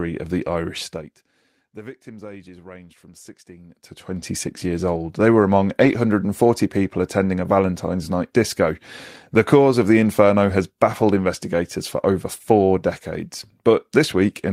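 From 5.81 to 5.95 s, after "were among", a lost packet rebuilt from error correction plays about 80 ms as a rougher, noisier low-bitrate copy, not a gap or smeared concealment.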